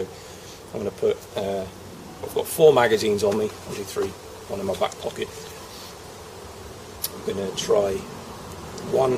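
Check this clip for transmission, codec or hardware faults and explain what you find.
One fault is present: an adaptive stream dropping to a lower bitrate partway through.

From 3.41 s to the end of the clip, the audio quality steps down abruptly with no gap or dropout. The streaming client, likely reacting to reduced connection throughput, switched to a lower-bitrate rendition of the same stream. Coding artefacts become more audible. The change is consistent with a move from roughly 64 kbit/s Opus to about 24 kbit/s.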